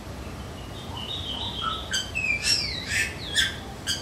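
Nothing technically wrong can be heard in this recording of sounds. No dropouts, glitches or other defects turn up anywhere in it.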